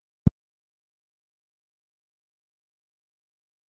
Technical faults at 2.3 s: speech suppressed in double talk

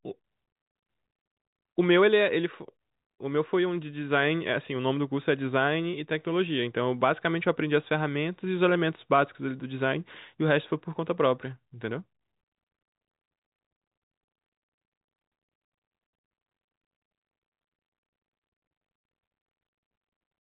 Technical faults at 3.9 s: none

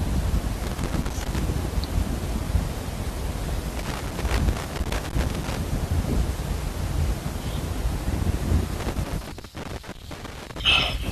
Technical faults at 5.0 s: loose connector crackle

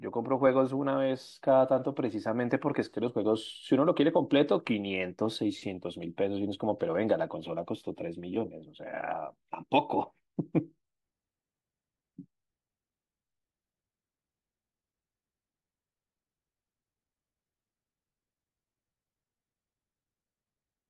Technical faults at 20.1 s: none

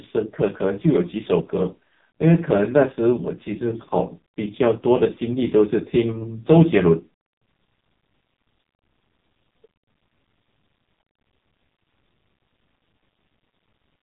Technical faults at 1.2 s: AMR narrowband mobile codec

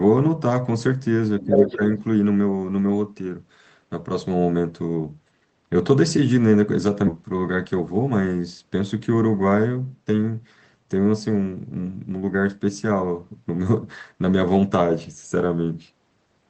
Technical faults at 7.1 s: skip ahead; jitter buffer speed-up

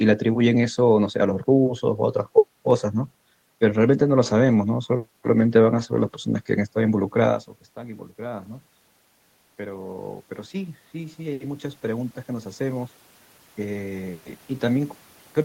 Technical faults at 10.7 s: automatic gain rising

